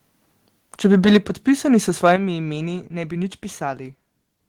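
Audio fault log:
0.85–1.31 s, microphone overload: the loudest peaks run about 5 dB past the converter's limit and get their tops sliced flat, giving a harsh crackle, likely from input gain set too high.
1.17 s, microphone volume stepped down: voice and background both drop by about 4 dB in one sudden step, likely the call software cutting mic gain after that clipping.
2.05–2.13 s, microphone overload: a short crackly burst where peaks overshoot by about 3 dB and flatten against the ceiling, likely because the input is still set too hot.
2.16 s, microphone volume stepped down: a sharper level drop of about 8 dB right after that burst, likely the software trimming the mic input a second time.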